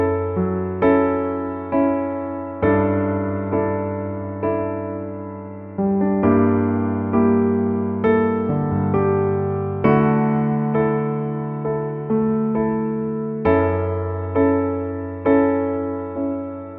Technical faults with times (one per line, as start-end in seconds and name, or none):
none